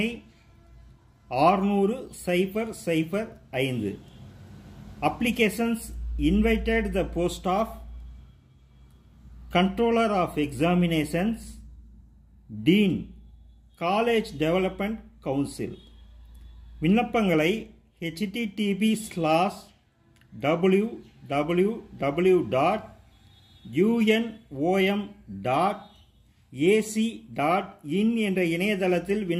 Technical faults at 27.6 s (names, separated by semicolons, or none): none